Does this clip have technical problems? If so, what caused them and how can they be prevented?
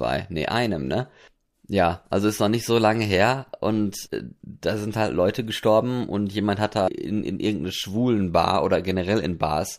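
Yes. Audio missing between chunks: at 4.08 s, after "so lange her und", and at 6.88 s, before "in irgendeine", about a fifth of a second vanishes with the edges butted together. Unlike a dropout, no silent gap remains. The regular spacing likely reflects 3-second processing chunks. Overlapping or buffering the chunk boundaries so the handover loses no samples prevents this.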